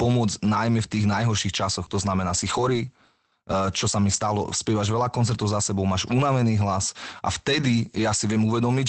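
Short stretches of speech turn rougher and noisier, with no gap in the sound, from 2.29 to 2.83 s, from 4.13 to 4.15 s (between "čo sa mi" and "spievaš veľa koncertov za"), and from 7.51 to 7.65 s after "máš unavený hlas a". Each is a lost packet rebuilt from error correction. Packets were dropped, and the decoder played the coarse, low-bitrate copies carried in the following packets. This is Opus in-band forward error correction on the call path, which is limited to 8 kHz.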